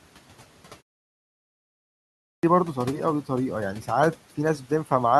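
A short speech recording with a clipped start after a pause: the audio is silent for about 1.09 s, and when it resumes at 1.83 s the first 0.60 s of speech, through 2.43 s, is missing, so the sound begins abruptly without its opening. This points to the output device dropping into a sleep state during the silence and needing time to wake and relock before passing audio again. The room noise sits about 23 dB below the speech.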